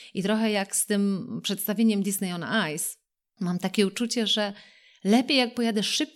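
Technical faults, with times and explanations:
Nothing technical trips up this speech recording; there's no fault here worth flagging.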